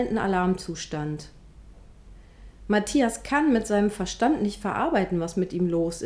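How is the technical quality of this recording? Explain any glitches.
No glitches are audible anywhere in the recording, so there is nothing to explain.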